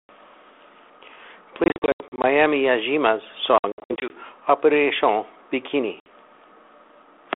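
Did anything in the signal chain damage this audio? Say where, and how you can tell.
Yes. The network stage shows packet loss on an ADPCM call: 1.64 to 2.25 s (dropouts totalling 300 ms, longest 80 ms), 3.58 to 4.13 s (260 ms, longest 60 ms), and a single 60 ms gap at 6.0 s. On a waveform these appear as flat, silent holes with sheer edges. On a spectrogram they are blank vertical stripes. After each gap, speech resumes slightly distorted while the G.726 decoder's predictor and step size resynchronise.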